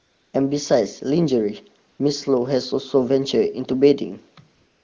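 AMR comfort noise fills 0.00–0.33 s, 1.89–1.99 s and 4.55–4.84 s. The phone stopped sending speech frames, so the real background becomes a smooth, steady synthetic hiss rather than a gated silence.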